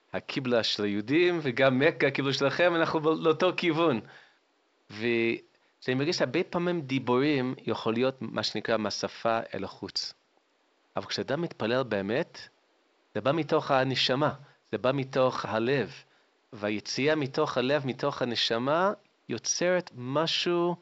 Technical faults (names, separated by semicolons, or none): none